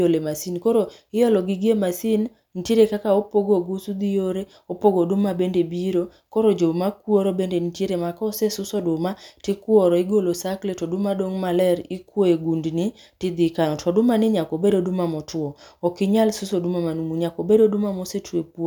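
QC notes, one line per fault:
No faults heard.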